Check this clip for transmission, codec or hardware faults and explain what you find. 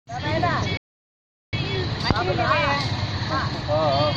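One fault stands out. From 0.77 to 1.53 s the sound drops to silence for 0.76 s before resuming, a playback stall. The player likely ran out of data or had its thread blocked.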